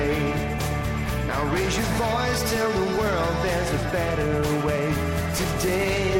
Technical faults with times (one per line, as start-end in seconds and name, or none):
none